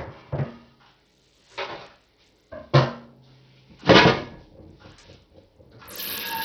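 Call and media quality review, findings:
Bluetooth SBC compression, throughout: treble dropping out and flickering, gritty noise and aliasing riding on top. Heavy damage, sounds like a low bit pool around 64 kbps, likely the Bluetooth link.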